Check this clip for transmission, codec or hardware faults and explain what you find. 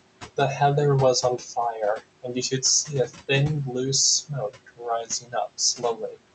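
The clip has two related processing faults, both from noise suppression acting on speech recorded with room noise about 15 dB below the voice. The call codec's band limit, audible as nothing above roughly 8 kHz, fits Opus at around 64 kbps.

Noise suppressor artifacts run throughout. The suppressor estimates the steady background band by band and pulls it down by about 21 dB frame by frame. The noise therefore drops away between words and returns underneath them.

Speech cut by the noise suppressor occurs at 2.23–2.63 s, 3.07–3.3 s, 4.49–4.87 s, 5.03–5.59 s and 5.77–6.18 s. In these spans the suppressor mistook quiet speech for noise and cut it by about 13 to 18 dB, so stretches of roughly a tenth to a third of a second sound swallowed or faint.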